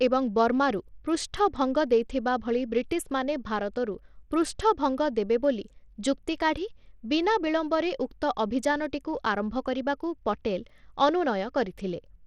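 From start to finish, the speech sounds thin and gritty. The top end is missing or flickers in and out. A coarse, granular noise clings to each syllable, with aliasing riding on the sound. The damage is plainly audible. The likely cause is Bluetooth SBC compression at a small bit pool, which fits a rate near 80 kbps. SBC splits the signal into a few wide bands. The weak upper bands get starved of bits, and the rest are quantised roughly.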